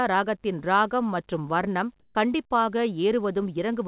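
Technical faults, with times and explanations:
2.0–2.15 s, comfort noise in place of the background: after "ராகத்தின் ரானம் மற்றும் வர்ணம்" the real background turns into steady, featureless noise about 16 dB quieter, likely from discontinuous transmission. Unlike a dropout, the gap is not silent.
2.13–2.15 s, onset clipped by the voice detector: the next sound begins abruptly with its first 20 ms missing, likely because detection lagged. Unlike a noise gate, the missing start is filled with synthetic noise, not silence.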